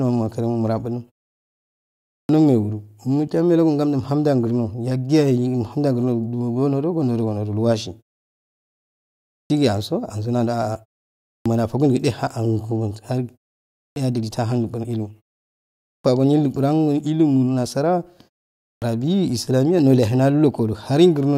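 Speech after each pause starts abruptly, its opening sounds missing, at 1.99, 9.23, 11.15, 13.67, 15.72 and 18.53 s, with roughly 0.27 to 0.32 s gone each time. This is clipped start after a pause: the output device sleeps through silence and wakes too late.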